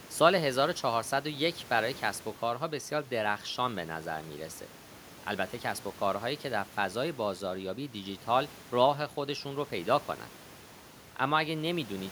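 No faults are audible anywhere in this recording of speech.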